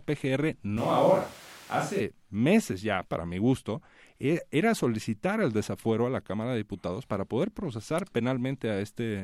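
A speech clip in which, from 0.77 to 2.00 s, the sound turns abruptly roomy and thin, most likely a switch to a distant microphone: level holds roughly steady, but the spectrogram shows weakened lows, smeared reverberant tails and a noise floor around 25 dB below the speech.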